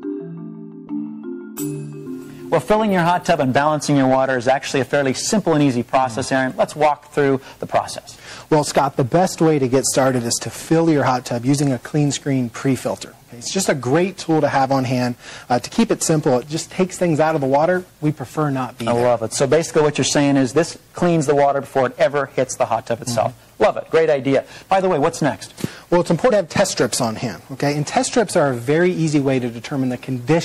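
Throughout the clip the sound has a watery, swirling quality, with metallic chirping on bright transients, smeared attacks and treble that stops abruptly at a fixed ceiling. This is plainly audible MP3 compression, which likely comes from a low-bitrate encode, around 64 kbps. Starved of bits, the encoder discards upper frequencies and lets faint spectral lines flicker on and off between frames. Unlike broadband hiss or a simple low-pass filter, the damage shifts constantly with the material.

At 26.3 s the audio jumps forward slightly, marked by a short smeared blip. These are compressed frames skipped: the decoder did not play roughly two frames of 26.1 ms each, so about 50 ms of material is gone. A hard cut in raw audio would give a sharp click, and a dropout would leave silence. Here the overlapping frames on either side blend across the gap, so the join is a brief blur and nothing is missing except time.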